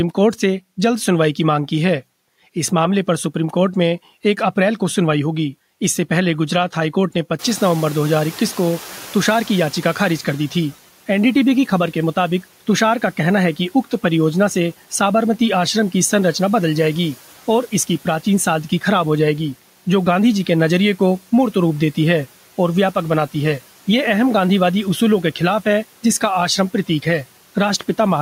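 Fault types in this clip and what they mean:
Noise suppressor catching up: the background noise in the room jumped by about 19 dB at roughly seven and a half seconds, and the suppressor's noise estimate trailed behind that change. From 7.38 s the louder noise passes through with too little reduction. Over about 3 s it adapts, and by 10.41 s the noise has been pushed down by about 8 dB, settling well below the speech.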